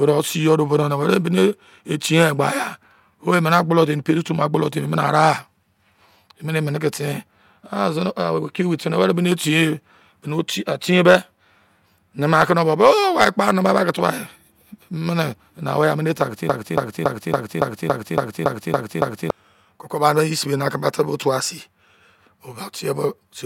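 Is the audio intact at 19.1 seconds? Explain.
No: a broken-record loop spans 16.5 to 19.3 s, one 0.28 s fragment repeating ten times, likely from a stalled stream resending its last fragment.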